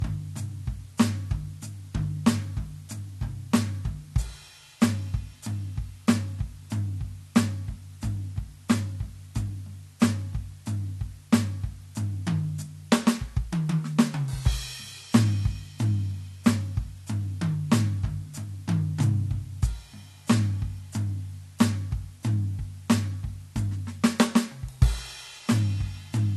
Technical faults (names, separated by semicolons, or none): low bit depth with dither; low-bitrate audio saved at a high bitrate